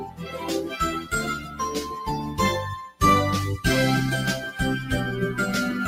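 A noise suppressor applied to music or sounds runs throughout, reading steady content as noise and swinging its level by roughly 10 dB, so held notes and tails sink while attacks mostly get through. Sound is cut by the noise suppressor from 0.0 to 0.47 s (about 13 dB down), 1.35 to 1.6 s (about 9 dB) and 2.21 to 2.39 s (about 7 dB). Sustained or decaying parts sink while sudden onsets pass, unlike a dropout, which silences everything.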